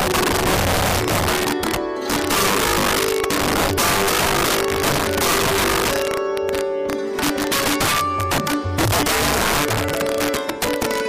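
Integer overflow runs through the whole recording: the signal is driven about 9 dB past full scale, and instead of being held at the limit, the loudest peaks wrap to the opposite sign, producing harsh cracks on the peaks. On a waveform these appear as vertical spikes jumping rail to rail, and on a spectrogram as bright full-height streaks. Compressed frames are skipped at 2.34 s and again at 10.67 s, where the audio lurches forward by roughly a tenth of a second, consistent with a few frames of about 26 ms each going missing. Each join shows as a small discontinuity in the waveform.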